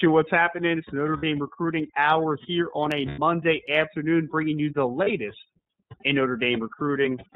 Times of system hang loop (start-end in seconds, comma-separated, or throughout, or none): none